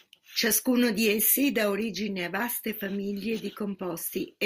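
No technical faults occur anywhere in this speech, so there are none to describe in time order.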